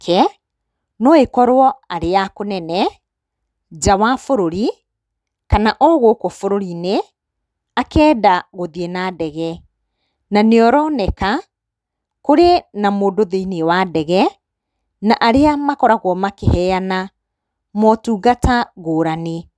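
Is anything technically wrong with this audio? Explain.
No, nothing technically wrong can be heard here.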